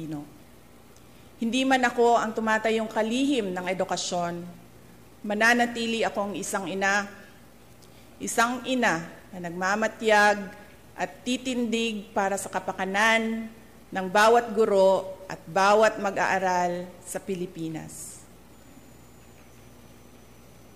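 No technical faults are audible.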